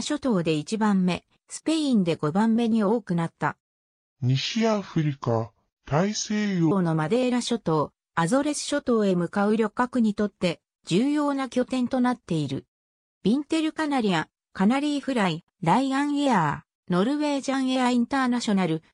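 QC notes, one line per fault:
3.79–6.71 s, section at the wrong speed: likely played against a mismatched clock at 0.687x, so the sound drags slowly and drops about seven semitones.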